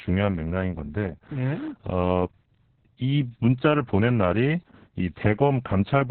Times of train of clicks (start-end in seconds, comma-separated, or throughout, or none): none